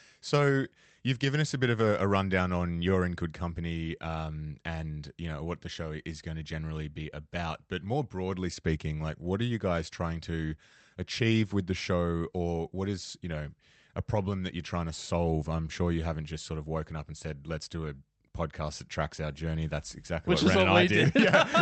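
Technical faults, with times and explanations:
No technical faults can be heard in this speech recording.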